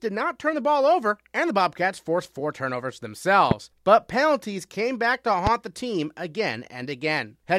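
A loud pop hits at 3.51–3.54 s and again at 5.47–5.49 s, each a single sharp burst peaking roughly 15 dB above the speech, which continues underneath. A sudden voltage pulse, likely from a plug, switch or static discharge, entered the signal chain.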